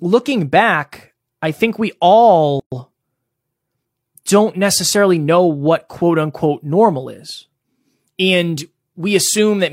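At 2.60 s, a gap at a join of encoded pieces cuts the speech: untrimmed encoder delay and padding leave a 123 ms gap, seen as a flat waveform and a blank spectrogram band.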